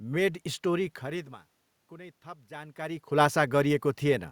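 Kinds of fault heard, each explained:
Automatic gain rising: The gain control judged the input too quiet after it fell by about 19 dB, and from 1.89 s to 3.06 s it raised its gain by about 4 dB in a slow ramp rather than a single step. Over that span the speech and the room noise swell together, so the background grows along with the voice. This differs from the plain level changes where the talker moved.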